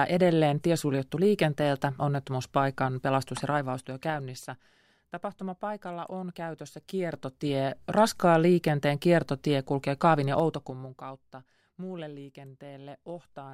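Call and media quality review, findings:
Zipper noise, 3.36 to 4.64 s: gain ramp applied in unsmoothed 3 dB steps, roughly three a second, about 15 dB down; each step clicks, giving audible ticking over the speech.

Zipper noise, 6.68 to 8.0 s, ending just before "liikenteen kiertotie kulkee": stepped gain stage, 3 dB increments about 15 dB back up, roughly three steps a second; zipping rides on the level rise.

Zipper noise, 10.32 to 11.24 s: stepped gain without interpolation, 3 dB per step, about 20 dB down at roughly seven steps a second; faster, denser clicking during the fade.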